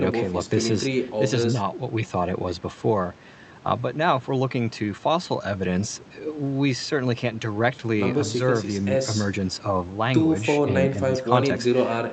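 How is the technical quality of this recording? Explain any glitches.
No glitches or faults can be heard in this recording.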